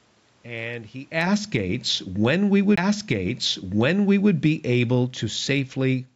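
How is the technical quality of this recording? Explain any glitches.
Two faults affect the recording: a gain control that keeps pulling the level down, and a single disc skip.

Automatic gain falling runs from 1.03 s to the end of the clip. The automatic gain control judged the input too loud, or its background noise too strong, and began lowering its gain gradually. The speech sinks steadily over the remaining five seconds, and the room background sinks with it. That shared decline separates it from the talker moving near 1.0 s, which changes only the voice level.

A CD skip occurs at 2.76 s. A knock or disc flaw made the laser jump to a different turn of the spiral. The player muted very briefly, only about 15 ms, then resumed from another point in the track. The result is a tick followed by an abrupt discontinuity, as a short stretch of the speech is either repeated or dropped.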